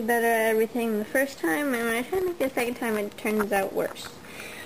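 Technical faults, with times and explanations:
1.77 to 3.63 s, periodic USB or driver dropouts: roughly thirty brief gaps, each around a millisecond long, fall exactly 0.064 s apart and are filled with silence, so the sound ticks at a steady rate of about 15.6 per second. A background task stalling the bus or driver at a fixed interval explains this. The strict, unchanging spacing separates it from random dropouts, packet loss or isolated clicks, which arrive at irregular times.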